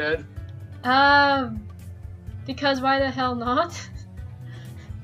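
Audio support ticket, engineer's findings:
DAB burbling at 3.2 s. Brief noise blips in single sub-bands, 7 frames hit. Bit errors at a low rate slipped past error correction, corrupting MP2 samples.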